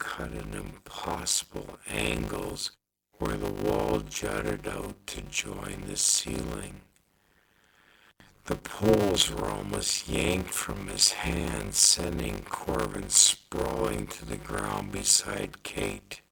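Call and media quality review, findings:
Block size mismatch (padded), throughout. Steady 100 Hz buzz. Speech runs at 0.53x speed, timbre intact. Fits 256-sample writes zero-padded into 480-sample reads.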